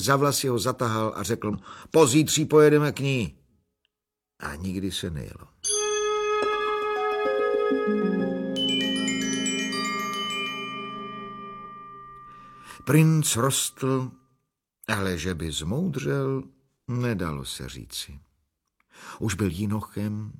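The audio jumps forward three times, at 1.49–1.55 s, 6.41–6.46 s and 11.61–11.67 s. These are compressed frames skipped: whole coded frames never reached the output, either missing or rejected by the decoder as damaged. The jumps fit a frame length of 46.4 ms. Roughly two frames, about 100 ms, vanish at the first point and one frame, about 50 ms, at each of the others.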